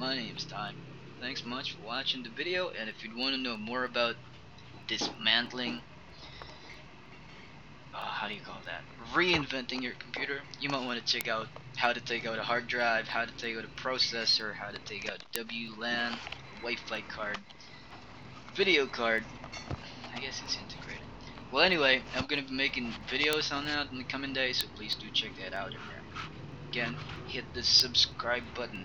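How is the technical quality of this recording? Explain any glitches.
The recording is marred by a steady train of clicks. Word clock ticks run from 0.36 s to 28.76 s, roughly every third of a second, about a hundred in all. A receiver clocked independently of its source drifts by something like 70 ppm. It drops or repeats a single sample at each slip, giving sharp ticks of uneven strength. On a spectrogram they appear as evenly spaced thin vertical lines. In the waveform they show as one-sample steps.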